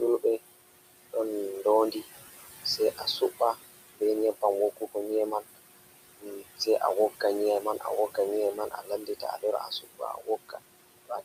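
Throughout the recording, noise suppressor artifacts are audible. The suppressor pulls down whatever bands it judges to be steady noise by about 19 dB. The room noise, sitting about 13 dB below the speech, therefore sinks in the gaps and swells back under each phrase. Because this pumping follows the speech itself, it sounds different from a steady hiss or a dropout.

Speech cut by the noise suppressor first appears between 1.13 and 2.06 s. Only about a tenth of a second of that span is affected, and the deepest dip is about 10 dB, so some soft sounds come out faint. From 2.78 to 5.58 s it is heavier: around 0.4 s of speech is lowered, by as much as about 21 dB. From 6.19 s to the end, drops of up to about 21 dB recur. Here the suppressor is mistaking soft consonants, word endings or a quiet phrase for background, so they sound swallowed. Unlike a codec dropout, the sound never falls to silence or breaks off abruptly. 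It fades down together with the background.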